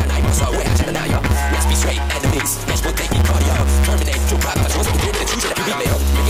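From start to finish a steady buzz near 138 Hz rides over the sound, which runs about 1.6 times faster than normal while keeping roughly its natural pitch. This is a block size mismatch (truncated): one stage hands over longer blocks than the next stage takes in, so the tail of each block is discarded. The repeating seam makes the buzz, and the lost material shortens the timeline, which fits a writer producing 512-sample blocks.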